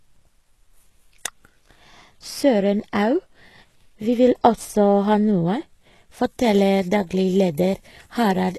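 HE-AAC compression affects this speech clip throughout, and the damage is plainly audible. The treble is most likely rebuilt by spectral band replication: the codec keeps only the lower spectrum and fills the top by copying lower bands upward under a coarse envelope. The copied harmonics don't line up with the real ones, so sibilants sound gritty and metallic. Nothing is left above about 12.3 kHz, and the damage points to a bitrate around 16 kbps. Pre-emphasis left on runs from 6.25 s to the end at 8.59 s. A treble boost applied for transmission was never followed by its matching de-emphasis cut, so high frequencies stand about 11 dB above 1 kHz at 10 kHz. The tilt fits a 50 µs FM curve. That final stretch sounds thin, bright and sharply sibilant.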